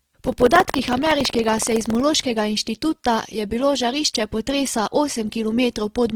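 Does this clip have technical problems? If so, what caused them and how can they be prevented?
Yes. From 0 to 2.03 s, ending just before "inštituta je bilo žarišče", buffer tearing adds a 21.5 Hz buzz, consistent with a 2048-sample buffer: a small slice of each period repeats audio from about 150 ms earlier. Keep writer and reader pointers apart with adequate buffer headroom.

Throughout, the speech sounds grainy and rough, likely from Opus compression in music mode at roughly 16 kbps. Encode at a higher bitrate or use the speech-optimised mode.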